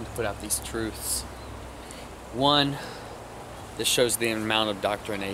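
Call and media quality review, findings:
No faults found on review. Nothing heard in the audio calls for a ticket against any component.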